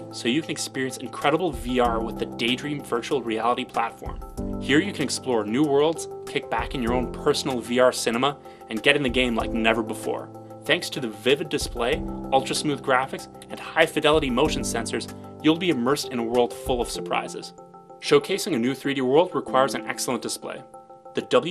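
Throughout the sound there is plainly audible MP2 compression damage: a dull top end with upper sub-bands flickering on and off and a gurgling, granular grain, likely from MPEG Layer II encoding at around 80 kbps. Unlike a simple low-pass filter, the missing treble keeps switching rather than staying cleanly cut.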